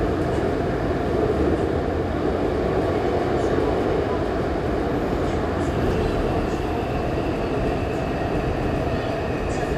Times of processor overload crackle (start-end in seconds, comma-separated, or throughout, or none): none